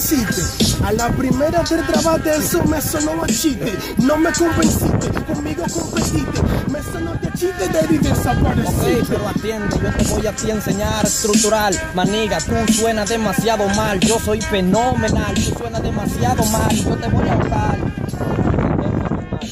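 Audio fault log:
No fault is logged for this audio.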